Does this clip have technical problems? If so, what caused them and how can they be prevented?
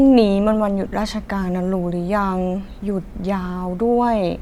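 Yes. From 0.88 to 0.91 s the speech briefly turns into a short, hissy smear, as if the sound had been blurred into noise for an instant before snapping back. This is lost LE Audio frames: about 30 ms of Bluetooth LE Audio data never arrived, which fits three consecutive 10 ms frames, and the LC3 decoder covered the gap by repeating the last spectrum with randomised signs. That turns tonal detail into noise. Keeping the receiver close to the source and clear of 2.4 GHz interference, or allowing retransmissions on the link, prevents these losses.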